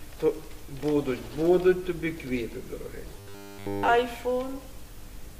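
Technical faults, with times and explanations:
3.17 to 3.89 s, robotic sound from repeated short buffers: across this whole stretch the sound becomes a rigid, metallic buzz pitched at 100 Hz, which points to a 10 ms slice being looped. The likely cause is audio arriving too late, so the playback side keeps repeating its last short buffer while the fresh material is skipped. Unlike a dropout, there is no silence, and unlike clicks from lost packets, the buzz holds one fixed pitch while loosely tracking the sound's shape.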